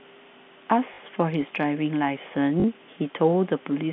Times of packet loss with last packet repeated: 0.94-0.98, 2.60-2.64

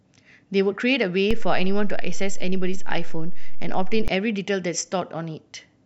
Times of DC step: 1.31-4.08

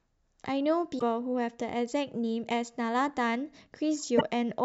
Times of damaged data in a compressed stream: 0.95-1.02, 4.14-4.21

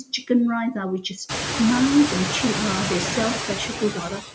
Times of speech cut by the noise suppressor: 0.06-0.30, 3.68-4.26

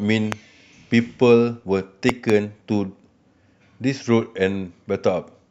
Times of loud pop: 0.32-0.34, 2.09-2.32

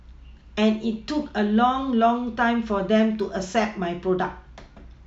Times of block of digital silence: 3.20

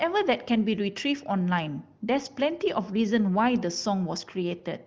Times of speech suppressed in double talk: none

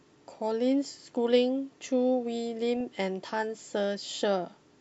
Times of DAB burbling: 2.76-2.81

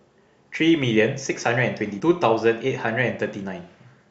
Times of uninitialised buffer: none

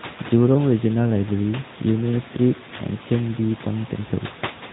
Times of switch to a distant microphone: none

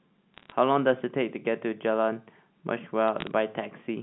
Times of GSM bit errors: none

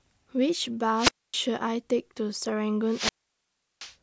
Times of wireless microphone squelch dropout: 0.96-1.36, 2.87-3.93

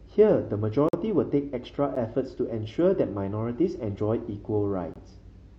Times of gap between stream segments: 0.89-0.93, 1.95, 4.94-4.96

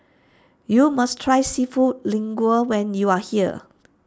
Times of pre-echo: none

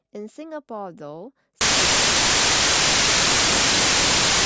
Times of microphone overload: none

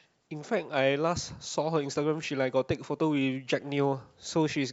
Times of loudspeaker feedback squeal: none

